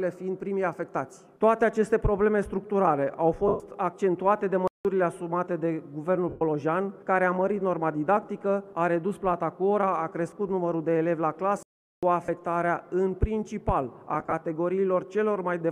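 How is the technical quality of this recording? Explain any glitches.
The recording has two recurring glitches: short dropouts from lost Bluetooth frames, and two outright silences from playback stalls. The light lossy compression underneath is faint and not a concern.

Lost LE Audio frames show up at 3.48–3.60 s and 6.29–6.42 s (about 120 ms each), at 12.25–12.29 s (30 ms), and scattered across 14.14–14.33 s in runs no longer than about 30 ms. With each gap the LC3 decoder keeps repeating the last spectrum with scrambled signs, so tones smear into a noisy wash that starts fading during the longer gaps.

Playback stall hits at 4.68–4.85 s (about 0.17 s) and 11.63–12.03 s (about 0.4 s). The sound simply cuts to silence mid-flow and then picks up again. That points to the player likely running dry of data or having its thread blocked for that moment.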